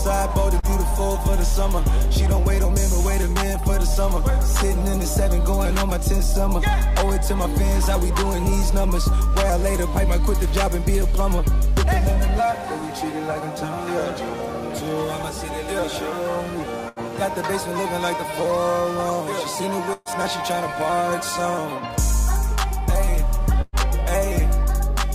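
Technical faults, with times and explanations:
0.59 to 0.66 s, short concealed packet loss: about 40 ms of audio failed to arrive, and the receiver covered roughly 34 ms of it by extending the preceding sound before blending back into the real signal. The result is a brief smear or wobble rather than an audible gap. It is too short for any decay to be heard, which sets it apart from the longer bursts later in the clip.
16.89 to 17.11 s, 19.93 to 20.08 s and 23.61 to 23.76 s, burst of packet loss: several consecutive packets were lost, 80 ms at the first point and 120 ms at each of the other two. The receiver filled about 76, 124 and 114 ms respectively by continuing the last sound and turning it down as each gap went on. This gives a held buzz or fading hiss, with a moment of silence at 19.93 s, before the audio resumes further along with the lost stretch missing.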